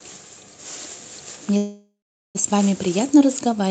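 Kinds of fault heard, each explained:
Call audio freeze: sound stalls at 1.57 s, fading into silence, then resumes at 2.37 s with nothing skipped, unlike a dropout; likely late packets emptying the jitter buffer.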